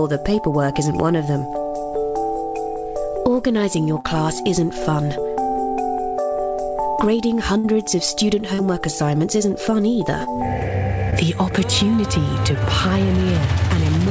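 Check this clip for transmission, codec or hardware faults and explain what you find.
Two kinds of transmission fault are audible: four short concealed packet losses and one burst of packet loss. They ride on a call path whose band stops at 8 kHz, which fits G.722 at 64 kbps.

Short concealed packet loss occurs at 4.00 to 4.06 s, 8.54 to 8.60 s, 10.24 to 10.28 s and 11.10 to 11.14 s. Between 20 and 40 ms of audio failed to reach the decoder in time, so the receiver extended the preceding sound to cover each hole, then crossfaded back. Each one comes across as a brief smear or wobble.

A burst of packet loss occurs at 7.58 to 7.66 s. About 60 ms of consecutive audio was lost or arrived too late to play. The receiver filled roughly 57 ms by carrying the last sound forward while fading it down, so a held buzz or decaying hiss replaces the real material. Playback then resumes slightly further on, with that stretch missing.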